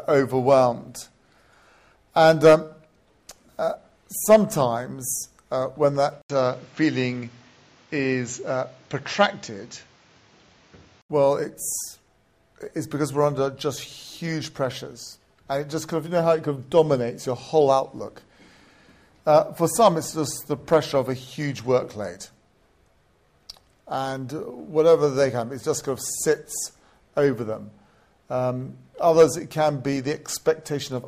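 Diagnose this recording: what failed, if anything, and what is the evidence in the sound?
At 6.22 s the sound drops out for about 80 ms, then returns dull and narrow. Nothing is present above 7.6 kHz. A new background noise sits roughly 30 dB under the sound. The level barely changes. At 11.10 s the full band returns. This points to the driver or device-routing stage. The likely cause is an input switched to a poorer device. The system briefly moved capture to a band-limited microphone with its own noise floor, then moved back.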